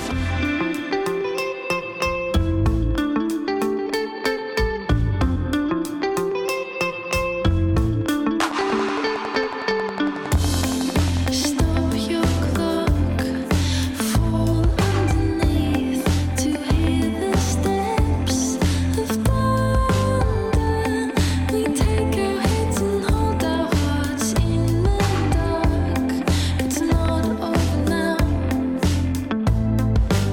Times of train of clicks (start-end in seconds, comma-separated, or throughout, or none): 8.51-11.27